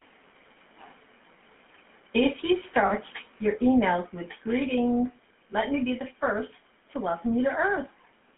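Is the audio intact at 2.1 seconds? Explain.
No, at 2.1 s the speech has a buzzy, gravelly roughness and a narrow band of about 200 Hz to 3.4 kHz, present throughout. The cause is the GSM full-rate codec, whose coarse pulse excitation and 13 kbps rate damage it plainly.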